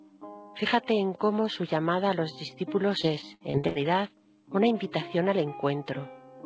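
Repeated packet loss (robotic sound) runs from 3.02 to 3.77 s in this call audio. About six dropouts, the longest 80 ms, are each patched by stretching the preceding sound, so roughly a quarter of that span turns choppy with pieces missing. The band-limited call path, with nothing above 8 kHz, fits a wideband codec such as G.722.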